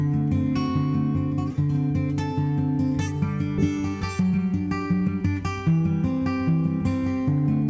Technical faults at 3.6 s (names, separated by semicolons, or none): skip ahead